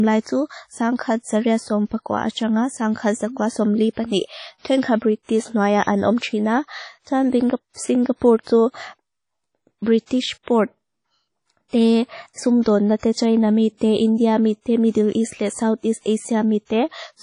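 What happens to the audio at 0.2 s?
At 0.2 s the speech already carries the artefacts of WMA compression, which are present across the whole clip. The audio has a ringing, washy quality, with a hiss that swells and recedes with the signal, and there is no content above 10.1 kHz. That fits a likely lossy transform encode at a low bitrate, around 32 kbps, where quantisation noise smears across each long block and weak spectral lines are discarded.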